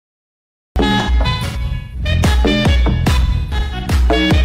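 The capture started late, so the first 0.76 s is digital silence and the sound then cuts in abruptly at 0.76 s, mid-event. This cut-off start has no natural attack or fade-in, just a hard edge where the signal appears.

From 0.99 s to 2.08 s, AAC frame loss with concealment sets in. Dropped frames are rebuilt by the decoder from the last good spectrum, giving smeared, noisy, phasey patches totalling about 555 ms scattered across roughly 0.94 s, with the longest gap around 150 ms. The same fault returns from 3.25 s to 3.92 s, covering about 341 ms spread over roughly 0.6 s, again with runs up to around 150 ms.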